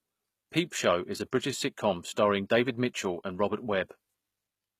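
From start to finish the speech carries plainly audible damage that likely comes from HE-AAC compression, at a rate consistent with roughly 20 kbps. The top end is rebuilt from copied lower bands rather than coded, so the treble sounds bright but wrong, with s sounds gritty and lispy.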